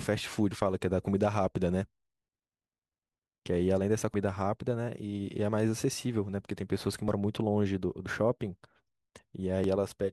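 At 0.51, 4.14, 7.08, 8.06 and 9.64 s the speech skips ahead. Each is likely a dropped buffer (overrun). Unread audio was overwritten and the edges joined. Roughly 150 ms goes first, about 100 ms at 4.14 and 9.64 s, and a few tens of milliseconds at 7.08 and 8.06 s.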